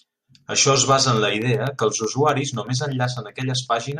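From 0.17 to 3.92 s, periodic USB or driver dropouts blank a fraction of a millisecond every 0.125 s, giving regular ticks; waveform shows evenly spaced gaps, spectrogram thin vertical lines.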